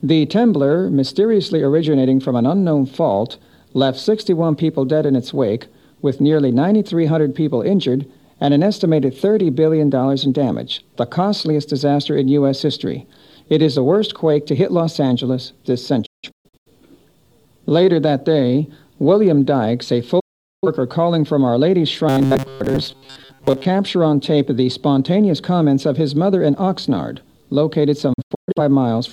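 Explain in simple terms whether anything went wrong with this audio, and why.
The sound cuts out three times: in several short holes between 16.06 and 16.71 s (the longest about 0.17 s), in one gap from 20.2 to 20.67 s, and in scattered holes from 28.13 to 28.6 s. Each is a digital broadcast dropout. The receiver lost good data and muted with a quick fade until the signal recovered, so that part of the programme is simply gone.

From 22.09 to 23.65 s the sound turns into a stiff, metallic buzz at a fixed pitch of 134 Hz. This is robotic sound from repeated short buffers. Audio likely arrived too slowly, so tiny slices of about 7.5 ms were replayed over and over. Most of this stretch is repeats rather than new sound.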